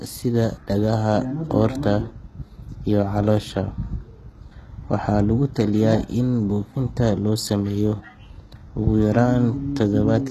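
Throughout the speech, treble above 12.4 kHz is absent and sibilants sound gritty and metallic, likely HE-AAC compression rebuilding the upper band from copied lower harmonics, consistent with roughly 16 kbps.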